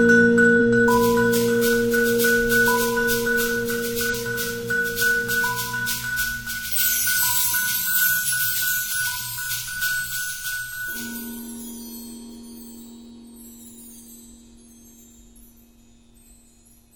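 At 0.56–0.59 s and 4.09–4.14 s there's damaged data in the compressed stream. Corrupted frames throw the decoder out of sync, so you get brief glitches.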